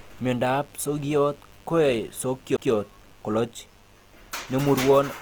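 A speech recording with three problems. Under the whole thing sits a mains buzz: a steady, raspy drone built on 50 Hz, roughly 30 dB below the speech. The rasp comes from sharp switching spikes, the kind a dimmer, rectifier or poor shielding lets in twice per mains cycle, so harmonics stack up well into the kilohertz range instead of giving you a smooth hum. The speech also has a grainy, rough texture, and the codec damage is plainly audible. The most likely cause is Opus in its music (CELT) mode. That mode holds each band's energy and papers over shortfalls by folding lower bands up or filling them with noise, so tones come out gritty instead of swirly. Bandwidth stays full, with content reaching about 20.2 kHz, and the level of grit fits a low bitrate of around 24 kbps. Finally, at 2.57 s there's a CD skip: a tick and a very short mute of about 15 ms, after which playback picks up from a different spot. 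That's the laser hopping to another turn of the disc's spiral after a knock or a flaw, so the audio jumps forward or back by a whole number of disc revolutions.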